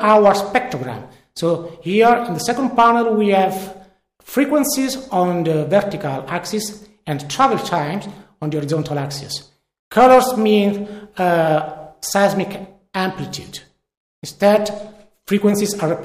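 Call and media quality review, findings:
Bit error spike at 2.04 s: single sharp broadband tick, one sample, peaking around -17 dBFS. Probable memory or digital-link fault; one flipped bit jumps the value, then returns.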